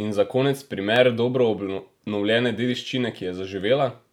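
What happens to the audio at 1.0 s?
At 0.96 s, after "za konec", a sharp click, likely dropped samples: a fraction of a millisecond is lost, so the waveform jumps, leaving a thin vertical spectrogram line.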